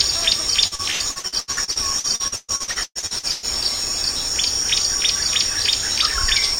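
From 0.67 s to 3.46 s, repeated packet loss gives a robotic sound. Around twenty holes, the longest 128 ms, are patched by stretching the preceding sound, which fills about 43% of that span. It sounds choppy, with pieces missing. A spectrogram shows smeared, repeated frames.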